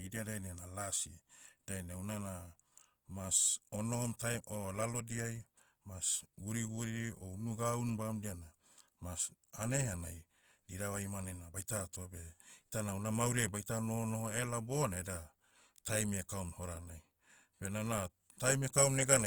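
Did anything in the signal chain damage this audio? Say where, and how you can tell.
Yes, at the codec stage, throughout the speech: it sounds rough and grainy rather than swirly, likely Opus compression in its music mode at a low rate, around 24 kbps. A spectrogram shows bands filled with noise, not holes, reaching about 20.2 kHz.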